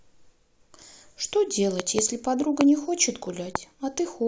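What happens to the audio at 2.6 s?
A sudden voltage step, most likely from a plug, switch, static discharge or driver glitch, gets added to the signal path from 2.61 to 2.63 s. The circuitry downstream shapes that pulse into a single loud pop, standing roughly 20 dB above the surrounding speech. The result is one sharp, brief burst sitting on top of the talking, which carries straight on underneath it without a break.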